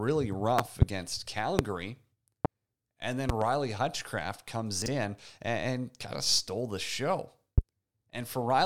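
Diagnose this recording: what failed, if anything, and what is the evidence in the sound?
Loud pops appear five times, sitting well above the speech, roughly 20 to 25 dB higher: a double pop at 0.59–0.85 s, single pops at 1.59–1.62 s and 2.45–2.48 s, another double at 3.29–3.44 s, and a single at 7.58–7.61 s. The speech continues under each one unbroken. That points to the analogue wiring or connection stage, likely an intermittent plug or static discharge injecting a voltage step that the following circuitry turns into a brief thump.

Chunks out of order show up at 4.82–4.88 s as a short jumbled moment. The spacing fits a 20 ms block delivered two blocks late and then played after material that should have followed it. Nothing is missing, but the sequence is wrong and three hard edits are left behind. This is a fault in the driver or buffer stage, where blocks are written or read out of sequence.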